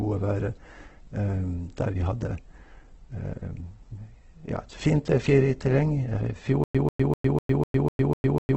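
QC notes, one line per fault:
Throughout: Opus compression. The speech sounds rough and grainy, with nothing above 8.2 kHz, likely from a low-rate Opus encode near 12 kbps filling starved bands with noise. On a spectrogram there is a hard ceiling at 8.2 kHz and smeared, noisy band energy below it.
6.64–8.57 s: stutter with silent gaps. A 0.14 s burst repeats eight times, every 0.25 s, with about 0.11 s of digital silence between repeats, running to the end. The likely cause is a stalled stream replaying its last fragment at each retry. On the waveform, identical blocks alternate with flat silent lines.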